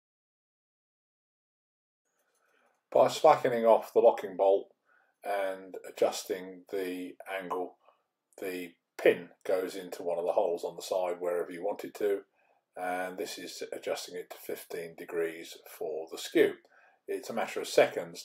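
No technical faults can be heard at any point in the clip.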